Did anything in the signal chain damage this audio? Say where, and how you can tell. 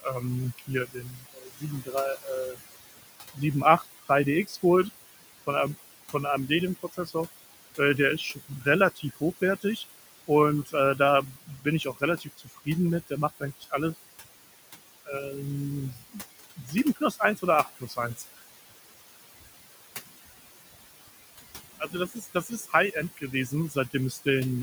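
Yes. Overdone noise removal in the call-processing stage leaves near-silent gaps with twinkling specks. On a spectrogram, bands blank out irregularly, leaving isolated bright dots.

Noise suppressor artifacts from the same stage: room noise, about 15 dB below speech, sinks by about 16 dB between phrases, then returns under speech. On a waveform, the noise floor pumps with each frame.

Speech cut by the noise suppressor occurs at 0.02–4.54, 6.83–7.15, 8.35–10.74, 11.34–13.73, 15.95–18.38 and 21.08–24.19 s. Soft consonants and endings drop about 12 to 18 dB, up to roughly a second in the first stretch. On a spectrogram, they show as faint, missing high-frequency energy.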